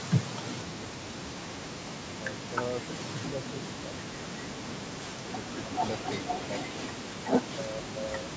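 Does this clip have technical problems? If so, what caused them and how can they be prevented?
Yes. The speech dips by about 5 to 15 dB at 2.25–2.55, 3.12–3.33, 3.7–3.92, 4.91–5.03 and 7.55–8.31 s. This is likely speech suppressed in double talk, where the echo canceller mistakes overlapping talk for echo and ducks it. Full-duplex-capable echo cancellers and headsets prevent it.

From 5.5 to 6.85 s, a copy of the voice trails 467 ms behind, only about 5 dB quieter. This is likely an echo leak from a loudspeaker whose echo the far-end canceller missed. Unlike room reverberation, it is a distinct, delayed repeat. Headphones at that end would prevent it.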